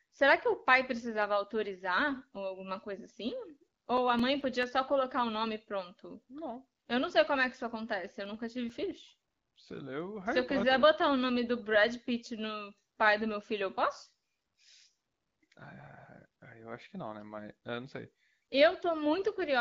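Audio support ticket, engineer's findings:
CD scratch ticks, 3.32–4.63 s (after "ou alguma coisa assim", before "só colocar o nome") and 8.26–10.01 s (after "que isso acontece eu"). About five small ticks a second, each only a few ms, of uneven strength. The likely cause is a disc blemish beating the error correction once per revolution, with the player concealing the lost samples.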